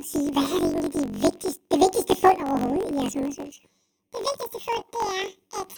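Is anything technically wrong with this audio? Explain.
Yes. Throughout the speech, planar audio is read as interleaved. Each roughly 21.33 ms block of left samples, then right, plays back as alternating pairs, so every block is replayed twice at double speed. This lifts the sound an octave and adds a 46.9 Hz flutter, which fits a 1024-sample block.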